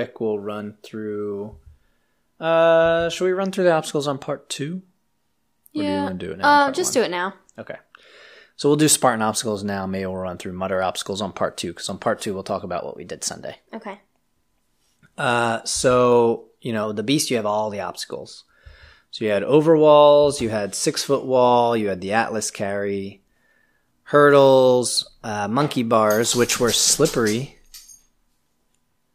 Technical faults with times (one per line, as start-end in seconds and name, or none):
4.51-6.35 drift correction step
12.78-14.17 drift correction step
16.83-18.07 drift correction step
24.85-25.67 drift correction step